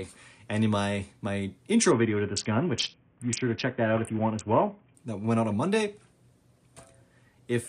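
Between 1.91 s and 4.95 s the audio shows a Bluetooth SBC bit pool drop: the top end goes dull and a gritty, grainy noise rises under the sound, then clears when quality recovers. The change is consistent with the sending device cutting the SBC bit pool sharply under link congestion, from 31 to a very low 5, around 50 kbps, so the highest sub-bands get almost no bits and the remaining ones are quantised coarsely.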